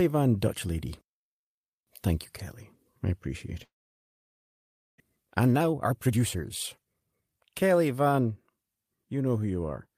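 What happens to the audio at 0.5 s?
Nothing goes wrong at 0.5 s; the audio is intact there, with no dropout, click, distortion or other fault at that moment.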